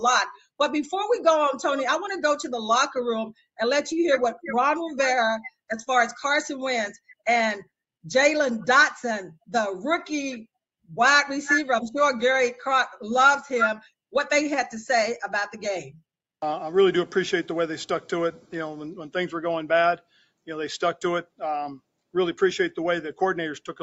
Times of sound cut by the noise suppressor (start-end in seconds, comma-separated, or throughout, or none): 19.98-20.48